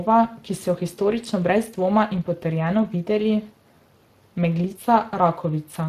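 Throughout this speech clip the voice carries a plainly audible hoarse, noisy grain, and nothing remains above 15.4 kHz. This is Speex codec damage: the CELP coder has too few bits for the excitation signal, and the roughness fits a rate of around 22 kbps.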